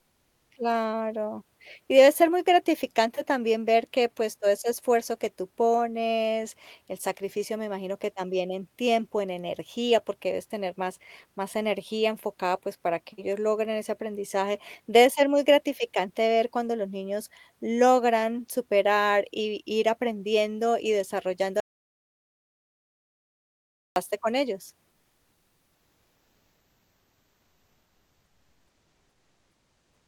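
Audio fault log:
21.60–23.96 s, audio dropout to silence: just after "ir aprendiendo y desarrollando" the speech stops dead and about 2.36 s is replaced by silence, with not even room tone. Speech resumes abruptly at "con ellos". The total absence of noise floor, rather than a quieter or smeared patch, sets this apart from a level dip or packet concealment. The likely cause is a momentary loss of the input while the recorder kept writing silence.
24.91–30.08 s, comfort noise in place of the background: from shortly after "con ellos" to the end, about 5.2 s, the pause is filled with a steady, featureless hiss sitting about 47 dB below the loudest speech and only about 1 dB lower than the real background was. Unlike the dropout, sound continues, but the natural texture and small movements of the room disappear. This points to a codec's discontinuous transmission, likely Opus DTX, synthesising noise while no speech was sent.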